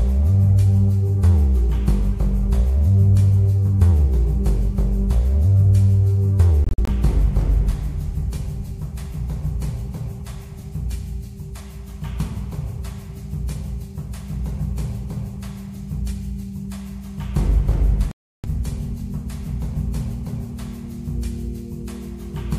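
Twice, packets on a wireless link likely failed to reach the headphones in time and were discarded, a Bluetooth dropout, so the output fell silent until valid data returned. From 6.64 to 6.89 s the audio breaks into several short holes, about 116 ms missing in all, the longest about 46 ms. From 18.11 to 18.46 s about 325 ms of audio is lost. The holes have abrupt or briefly faded edges, and the audio resumes further along, as though it had kept playing.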